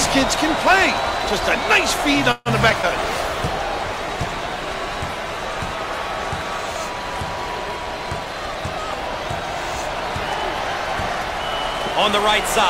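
A call audio freeze comes first, from 2.31 to 2.49 s. The sound stalls, and the last moment is stretched into a fading buzz for about 141 ms, with about 10 ms of near-silence. Then the audio resumes where it left off. Nothing is lost, but the stream now runs about 141 ms later. The likely cause is packets held up in transit, draining the jitter buffer until they arrived. Two short concealed packet losses follow, at 2.70 to 2.73 s and 2.82 to 2.86 s. Each drops about 40 ms of audio. Only a few milliseconds of continued sound cover each hole, so both are heard as quick smears. These skips also pull the delay back down, by roughly 30 ms and then 40 ms. A call bitrate drop runs from 3.07 to 7.94 s. The encoder falls from 128 kbps to 28 kbps and stays at the lowest rate for about 3 s. Coarser coding makes the sound rough and watery, and the top end is duller until the rate climbs back. Last, a jitter buffer speed-up runs from 8.25 to 10.14 s. 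The receiver trims tiny pitch-period slices, about 100 ms in total, to shrink its backlog. Playback runs at 104% of normal speed with pitch unchanged.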